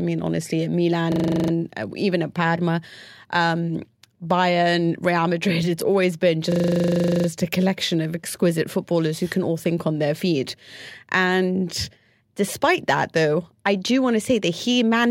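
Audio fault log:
1.12–1.52 s and 6.52–7.28 s, system hang loop: the same 40 ms piece of speech repeats exactly, 10 times and then 19 times, as the driver stalls and the hardware keeps replaying one ring buffer. At 25 Hz this is a rough, rapid buzzing stutter. Essentially no audio is lost.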